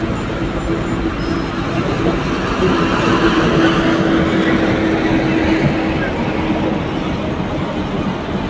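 Nothing stood out on listening to these sounds, which come through a call path whose G.722 coding leaves nothing above 8 kHz.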